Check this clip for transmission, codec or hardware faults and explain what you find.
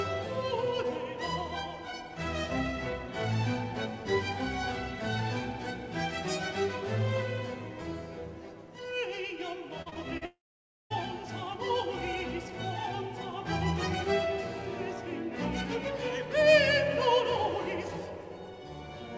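Two transmission faults sit back to back near the ten-second mark.

From 9.82 to 10.23 s, repeated packet loss (robotic sound): four short gaps, the longest 39 ms, patched by repeating prior audio. It sounds choppy, with comb-like smeared bands and stuttering waveform blocks.

From 10.25 to 10.92 s, the sound fades into about 0.55 s of silence, likely a long network dropout. This shows as a flat waveform and an empty spectrogram column before the audio resumes.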